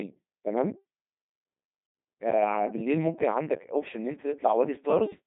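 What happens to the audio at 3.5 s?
At 3.5 s the speech sounds robotic and buzzy, with heavy codec damage that runs through the whole clip rather than appearing at that moment. Nothing is heard above about 3.8 kHz, and the sound sits in a narrow radio-style band of roughly 150 Hz to 3.6 kHz. This is the Codec 2 vocoder. Its decoder rebuilds the voice from sine waves, using only pitch, voicing, energy and a spectral envelope, so the original waveform is lost. The thin quality fits a rate of around 2.4 kbit/s.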